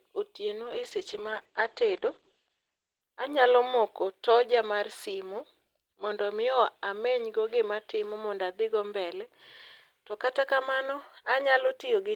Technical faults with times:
0.67-3.13 call bitrate drop

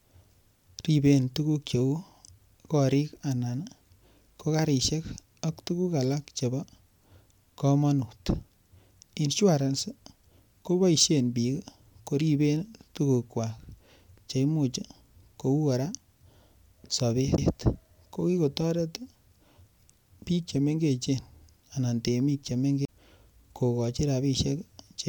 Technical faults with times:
17.37 CD skip
22.85-22.88 CD skip

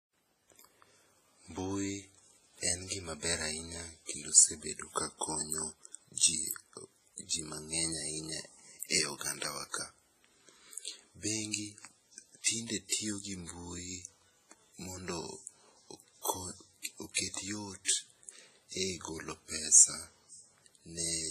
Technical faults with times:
0.00-21.30 WMA compression
12.43-12.46 pre-echo
17.85-17.88 pre-echo

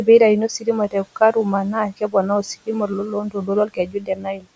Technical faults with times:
0.88-1.46 speech cut by the noise suppressor
1.88-4.46 speech cut by the noise suppressor

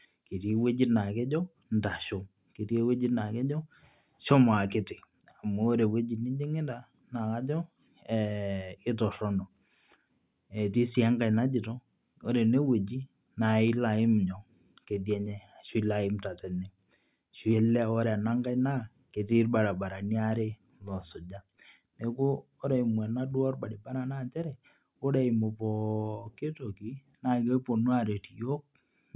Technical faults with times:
none

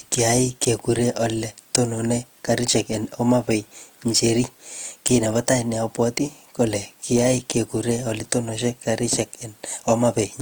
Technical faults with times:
0.00-10.42 Opus compression

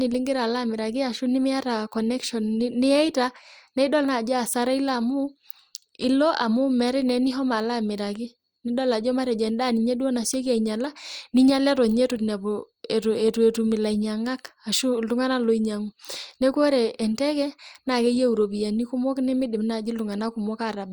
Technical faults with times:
none

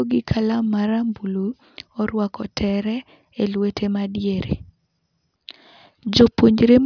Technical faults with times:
none

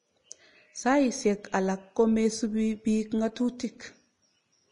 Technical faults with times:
0.00-4.71 Vorbis compression

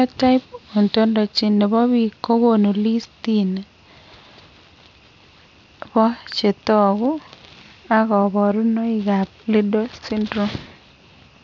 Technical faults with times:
0.00-11.44 aliasing

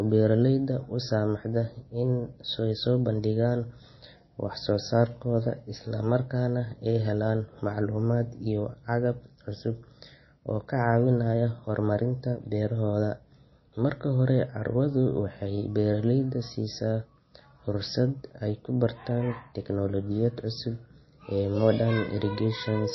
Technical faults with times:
0.00-22.94 MP3 compression

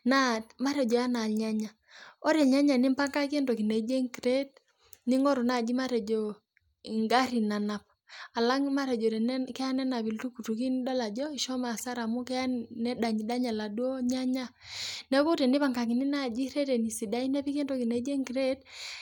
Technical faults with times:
none

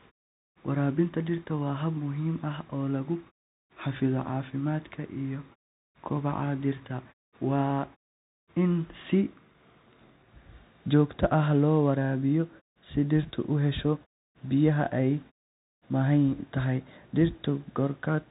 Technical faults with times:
0.00-18.31 Bluetooth CVSD headset codec

